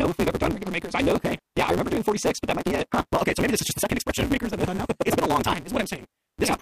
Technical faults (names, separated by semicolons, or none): block size mismatch (truncated); wireless microphone noise hit